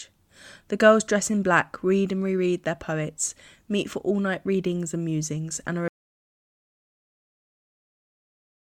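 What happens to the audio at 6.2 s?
At 6.2 s you're inside an audio dropout to silence that starts at 5.88 s and runs to the end. The speech cuts off mid-flow into dead digital silence, no room tone at all, most likely because the input was lost while the recorder kept writing silence.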